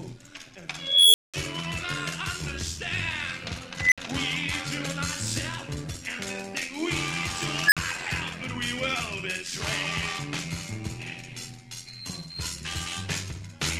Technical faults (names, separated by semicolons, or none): overlap-add ripple; unstable filter